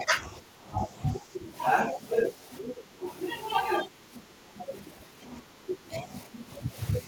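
An echo canceller that likely could not tell the talker from loudspeaker echo while both sides spoke turned the speech down at 0.0–0.12, 0.29–1.54, 1.92–1.99, 2.36–3.02, 3.84–4.71 and 4.98–6.76 s. This speech suppressed in double talk dips about 5 dB, and about 10 dB in the two longest stretches.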